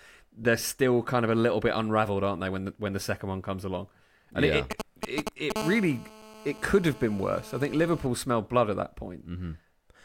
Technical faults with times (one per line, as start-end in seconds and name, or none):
4.71-5.52 GSM signalling bursts
5.56-8.07 GSM phone buzz